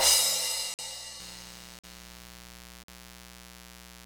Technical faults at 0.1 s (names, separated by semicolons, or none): none